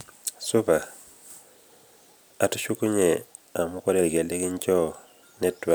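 No technical faults can be heard anywhere in the speech.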